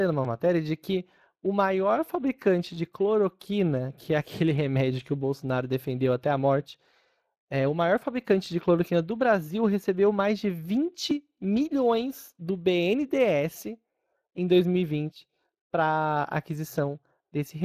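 From the first second to the last, the speech carries the Speex codec's signature damage. This older CELP codec rebuilds speech from a pitch and noise excitation, and with too few bits for that excitation the voice turns audibly hoarse and grainy. The degree of roughness points to a mid-range setting around 22 kbps. Nothing comes through above 15.3 kHz, so the top of the band is simply gone.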